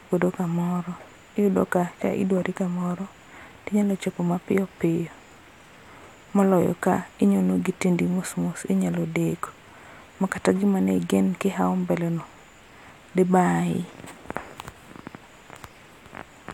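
No technical faults can be heard anywhere in the speech.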